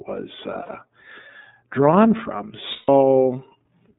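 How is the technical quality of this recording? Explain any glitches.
The recording has plainly audible coding damage throughout and two short dropouts.

iLBC codec, throughout: each 30 ms frame's excitation is coded independently, which fits the 13.33 kbps mode. The band runs from 150 Hz to 3.7 kHz, so the speech sounds muffled, slightly rough and synthetic.

Lost iLBC frames, at 0.63 s and 2.72 s: the decoder fills the gaps by repeating the last pitch cycle blended with noise. The first gap lasts 60 ms. The second, just after "drawn from", lasts 150 ms and fades as it goes. Both sound like a held, slightly buzzy or breathy vowel, and the voice is right again almost at once.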